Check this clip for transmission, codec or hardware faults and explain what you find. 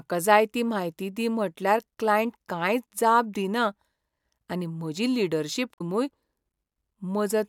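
One fault turns up in this speech clip. From 5.73 to 5.81 s, right after "आनी म्हजी लीडरशिप", there is damaged data in the compressed stream. Corrupted frame bytes derail the decoder, which loses sync and hunts for the next valid header. The result is a brief glitch. On a spectrogram it shows as a disturbance about 90 ms wide, and on the waveform the speech envelope breaks abruptly.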